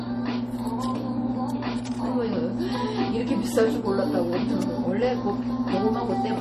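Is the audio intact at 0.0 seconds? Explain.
No. MP3 compression colours the audio at 0.0 s and throughout, likely from a starved encoder, which fits about 40 kbps. Everything above 14.7 kHz is cut and weak frequency lines flicker between frames, giving a plainly audible watery, swirling smear with blurred attacks.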